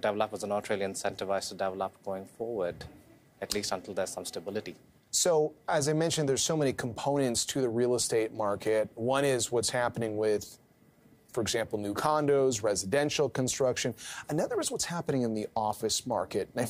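No technical faults are audible.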